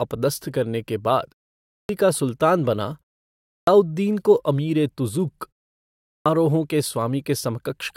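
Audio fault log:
1.62, 3.37 and 5.97 s: clipped start after a pause. The output device sleeps through each short pause and wakes late, swallowing 0.27 to 0.30 s, so speech resumes abruptly.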